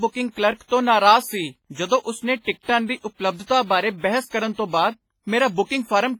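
WMA compression, likely, runs through the whole recording from start to finish. A transform coder of this kind splits the signal into long blocks and quantises each one coarsely, so its errors smear across tens of milliseconds around every syllable of the speech, and quieter spectral detail is dropped outright. The damage is heavy, which fits a low bitrate near 24 kbps: the result is a ringing, washy texture with a hiss that swells and fades along with the voice.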